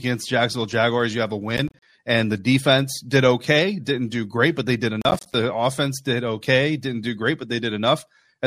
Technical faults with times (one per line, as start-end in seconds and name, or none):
1.57-1.82 processor overload crackle
5.02-5.34 processor overload crackle